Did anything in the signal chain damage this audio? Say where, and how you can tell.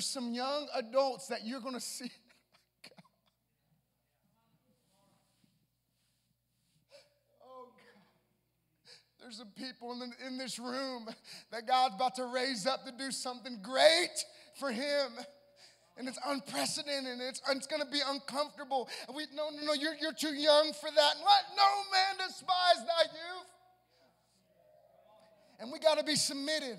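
Yes. From 18.95 s to 19.62 s the sound and its background noise drop together by about 6 dB in a single step, then return. This sudden gain jump likely comes from a digital gain stage applying a new setting without a ramp.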